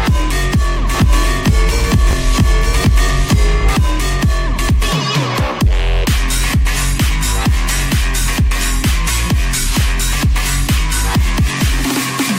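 From 0.94 s to 3.76 s a doubled audio track is heard: a second, full-band copy trails the original by roughly a second, around 5 dB quieter, with no decay or room colour. It starts and stops abruptly, likely from a second, slower capture path.

At 2.11 to 2.13 s there are chunks out of order: a 10 ms chunk plays one chunk late, after the one meant to follow it. Nothing is lost, but the swapped sequence creates three hard joins, heard as a brief jumbled moment.

Between 9.81 s and 11.8 s there are periodic USB or driver dropouts, about three of them spaced 1.0 s apart. Each replaces roughly a millisecond of signal with silence, so the audio carries regular small ticks at a steady one-second rhythm.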